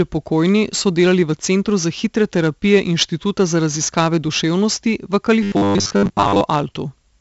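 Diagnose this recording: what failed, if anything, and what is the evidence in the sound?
The codec stage is at fault throughout: the audio was encoded with 4-bit ADPCM compression at 64 kbps, and the damage is heavy. Each sample is stored only as a coarse 4-bit step from a predicted value, so quantisation error rides on the speech as a gritty hiss that rises and falls with the voice's level, roughening sharp onsets where the step size lags. Nothing exists above 7.7 kHz, which fits a 16 kHz sample rate and leaves the voice dull.

From 5.43 to 6.41 s the voice collapses into a rigid, metallic robotic sound from repeated short buffers, buzzing at a fixed 100 Hz while loosely tracking the speech. The likely cause is a driver or buffer stage starved of fresh audio, replaying the last chunk of about 10 ms to fill the gap. The 100 Hz pitch is simply one over that chunk length. Most of that stretch, roughly two thirds or more, is repeated material, with the real audio skipped.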